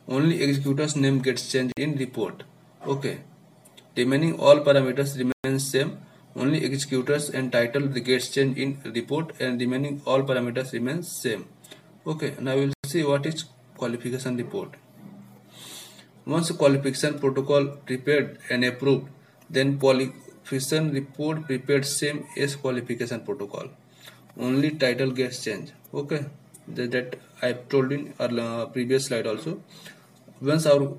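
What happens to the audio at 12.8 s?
From 12.73 to 12.84 s, 105 ms of clean silence, then playback resumes: likely a Bluetooth stall, the buffer emptied awaiting resent packets.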